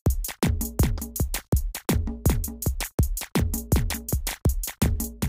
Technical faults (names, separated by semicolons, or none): doubled audio track